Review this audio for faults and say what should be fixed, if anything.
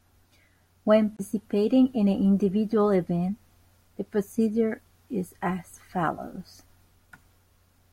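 At 1.17 to 1.21 s the speech skips ahead with a brief garbled glitch, likely a broken MP3 bit reservoir: after dropped 24 ms frames, the following frame reads another frame's bytes. Prevent it by cutting or streaming MP3 only at whole-frame boundaries with the reservoir data intact, or by decoding before editing.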